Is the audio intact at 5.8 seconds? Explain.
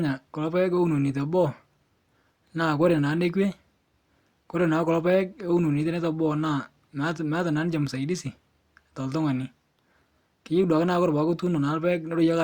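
Yes, the speech at 5.8 s is intact, with no dropout, click, distortion or other technical fault at that moment.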